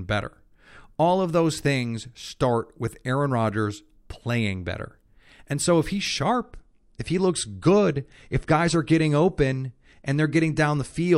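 Adaptive stream at a lower bitrate from 6.43 s to the end of this speech clip, just after "so if he's". The quality drops suddenly with no gap, and nothing remains above 11.3 kHz, which fits a switch from 128 to 48 kbit/s MP3.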